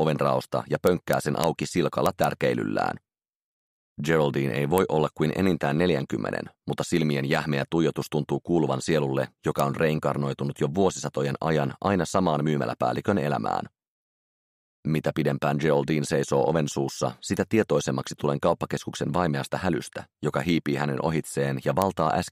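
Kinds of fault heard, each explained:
Integer overflow: Loud peaks passed the largest value the integer format could hold and wrapped to the opposite sign instead of being limited. Each such peak jumps across the full range in one sample. Here the overdrive is about 0 dB, so only the highest peaks cross. The result is harsh cracks, sharper than clipping. They come in bursts from 0.87 to 1.44 s and 2.06 to 2.24 s, and as single cracks at 4.78, 9.6 and 21.82 s.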